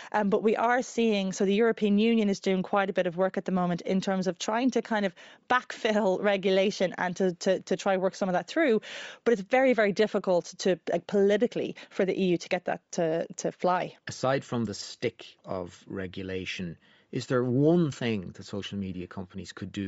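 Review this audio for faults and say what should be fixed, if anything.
Throughout the recording, the speech has a breathy, grainy edge in its upper range, which is plainly audible across the whole clip. The likely cause is Bluetooth LC3 compression at a low bitrate. The coder removes much of the high-frequency detail and replaces it with synthetic noise, so sibilants and the top of the spectrum sound rough rather than clean. The character fits a rate of around 32 kbps with 10 ms frames. To prevent this, record over a wired connection or capture locally, or configure the Bluetooth link for a higher LC3 bitrate.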